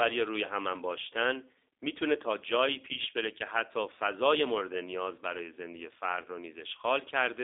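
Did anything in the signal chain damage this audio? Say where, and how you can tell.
Yes, at the codec stage: G.729 coding throughout, with nothing above 3.8 kHz and a rough, synthetic buzz that fits 8 kbit/s pulse-based rebuilding, unlike a clean band-limited line.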